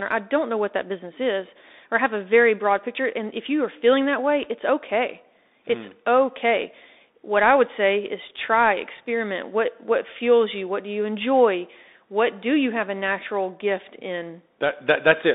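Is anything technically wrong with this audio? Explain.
Yes. Throughout the speech there is Bluetooth CVSD headset codec damage. The band runs only from about 250 Hz to 3.7 kHz, and the one-bit, adaptive-step coding, consistent with a 64 kbps link, lets loud high sounds overload, scratches the s sounds and leaves a granular hiss underneath.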